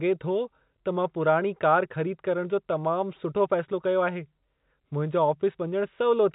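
No faults found in this speech, which is band-limited by telephone-grade G.711 coding with nothing above about 3.9 kHz.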